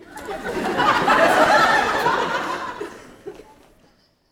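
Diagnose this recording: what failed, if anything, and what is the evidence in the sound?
Audio missing between chunks, likely at the driver or buffer stage: short skips at 0.49, 0.98, 1.95, 2.44 and 2.93 s, on a 0.5 s grid, each dropping roughly 15 ms. The waveform shows abrupt joins with no silence, and a spectrogram shows a thin vertical seam at each.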